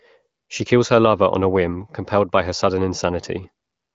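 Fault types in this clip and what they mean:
Nothing stood out on listening to the speech here, and no fault of any kind could be heard.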